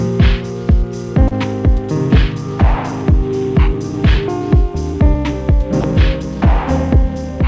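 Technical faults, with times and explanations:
1.28 to 1.34 s, short concealed packet loss: about 30 ms of audio arrived too late to be decoded. The receiver bridged the gap by extending the sound just before it for roughly 28 ms, then blended back into the real signal, which is heard as a brief smear or wobble. On a spectrogram the last frame's pattern is stretched flat and repeated across the gap, staying under the 8 kHz ceiling of the G.722 call path. The waveform shows a copied stretch where fresh detail should be.
5.81 to 5.84 s, sound dropped by the voice detector: for about 30 ms the real sound gives way to steady, featureless noise. This is likely because the sender's voice detector took that moment for background and stopped sending, so the receiver played comfort noise in its place until transmission resumed. It is heard as a tiny flattening or dropout. A spectrogram shows a short, uniform block of smooth noise with no structure. 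On the waveform, the signal's shape is briefly replaced by a low, even texture.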